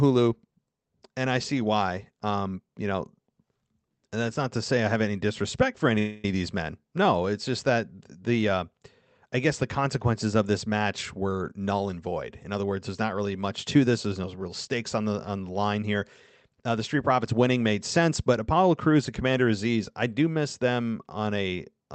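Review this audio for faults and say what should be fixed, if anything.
At 5.98 s, right after "have any disrespect for", the speech stalls for about 0.26 s before resuming with "of these men". This is a call audio freeze, likely caused by packets held up in transit. The jitter buffer ran dry, and the receiver stretched the last sound into a fading buzz or hiss. No speech was lost. The later audio was simply pushed back by that same 0.26 s. A deeper jitter buffer or a steadier network path would prevent it.

From 10.85 s to 12.89 s, between "the consequences of this" and "not really much to", the speech runs at 112 percent speed with its pitch unchanged. This is a jitter buffer speed-up. The buffer had built up surplus audio, as happens when delayed packets arrive together. To drain it, the receiver cut out short pitch-period slices, roughly 0.3 s in total. The speech sounds hurried there. 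A gentler catch-up rate, spread over a longer stretch, would prevent it.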